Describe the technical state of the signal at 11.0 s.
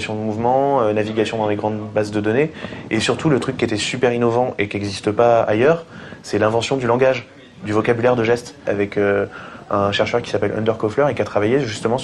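At 11.0 s the audio is in an adaptive stream at a lower bitrate. It switches abruptly at 5.12 s and stays there to the end, with no gap. A slowed connection forced the lower-quality version. Codec artefacts rise, consistent with a drop from 64 to 32 kbit/s.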